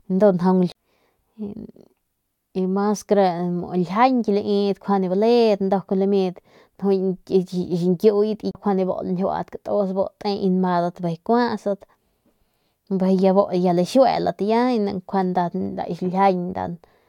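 CD skips at 0.72 s and 8.51 s in this speech recording: each time the laser jumps to another turn of the disc's spiral, the player mutes briefly, around 30 and 40 ms, then resumes from a different point in the track.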